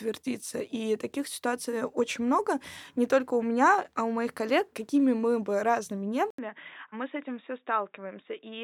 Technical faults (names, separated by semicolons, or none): input switched to a poorer device